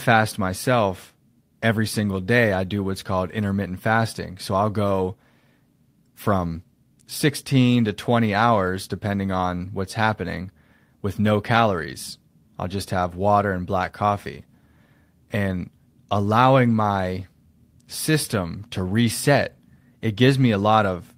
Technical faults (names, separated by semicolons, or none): none